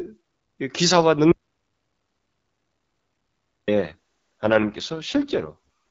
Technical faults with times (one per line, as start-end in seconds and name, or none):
1.32-3.68 audio dropout to silence
3.82-5.55 AMR rate drop